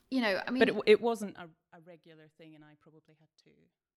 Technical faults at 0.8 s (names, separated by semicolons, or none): none